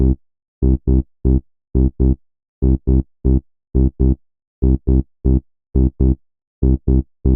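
No faults to report; nothing audible in the signal path needs attention.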